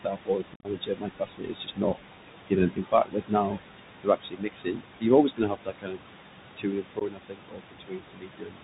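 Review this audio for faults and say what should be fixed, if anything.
Noise suppressor artifacts run through the whole clip. The suppressor pulls bands it judges to be steady noise down by about 20 dB, frame by frame, against room noise sitting only about 9 dB under the speech. The background therefore sinks in the gaps and surges back under the speech rather than staying a smooth bed. Lowering the suppression depth, or slowing its gain changes, would prevent this.

The Bluetooth CVSD headset codec is also present throughout, and its damage is plainly audible. Its one-bit up-or-down coding at 64 kbps passes nothing above 4 kHz, so the sound is narrowband. The adaptive step cannot keep pace with loud, bright transients, which come out distorted, s sounds turn scratchy, and a granular hiss rides under everything. Using a wideband headset profile such as mSBC or LC3 instead of CVSD would prevent it.

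Speech cut by the noise suppressor occurs from 0.04 to 1.97 s, 2.70 to 3.58 s, 4.02 to 5.99 s, and 6.57 to 8.62 s. In each stretch the suppressor mistook parts of the speech for noise and turned them down with the background, by as much as about 22 dB and about 19 dB in the second stretch. Soft consonants and word endings sound swallowed, adding up to roughly a second and a half in the longer stretches and about half a second in the shorter one. A less aggressive suppressor with better speech detection would prevent this.

Unconcealed Bluetooth headset packet loss comes first between 0.54 and 0.66 s, where about 82.5 ms of audio goes missing across 105 ms. The gaps are scattered, the longest run is 45 ms, and the pattern fits around ten lost packets. The sound there is chopped and crackly, with abrupt edges, and it returns briefly quieter as the CVSD decoder recovers. A second hole of 15 ms, likely two packets, comes at 6.99 s. 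Stronger radio links with packet loss concealment would prevent this.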